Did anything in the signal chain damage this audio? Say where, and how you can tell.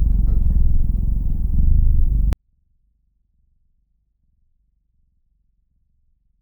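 Yes, at sample-format conversion. From 2.33 s the sound stays clean but falls about 48 dB. This is a 24-bit alignment error: low-byte 24-bit samples are read as 32-bit.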